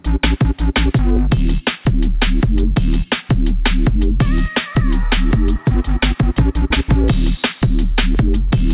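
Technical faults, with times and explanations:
Throughout: clock drift between sender and receiver. The sender's clock runs roughly 4 percent fast, so the receiver's jitter buffer keeps overfilling and has to throw audio away. A waveform shows small seams in the envelope. The spectrogram, empty above 4 kHz from the call codec, shows tiny vertical breaks.
0.39 to 8.71 s: repeated timing corrections. Short slices are dropped again and again at uneven spacing, always shortening the audio. It plays at 104 percent speed. Spectrogram patterns jump abruptly at each cut, and the waveform shows small splices.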